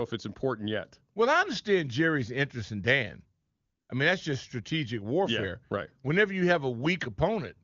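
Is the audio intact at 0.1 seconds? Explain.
Yes, the audio is intact at 0.1 s, with the speech passing cleanly through the AMR wideband (HD Voice) codec at its top rate, where any coding damage is faint at most.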